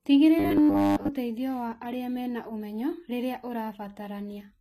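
A speech clip with the gritty treble of HE-AAC compression throughout: s sounds turn metallic and lispy, likely from spectral band replication rebuilding the highs, consistent with a bitrate near 20 kbps. A spectrogram shows nothing above 14.9 kHz and smeared, blocky upper bands. From 0.39 to 1.08 s the sound turns into a rigid 100 Hz buzz, robotic sound from repeated short buffers, likely a 10 ms chunk replayed over and over. The waveform shows identical repeating cycles, and the spectrogram shows evenly spaced horizontal harmonic lines.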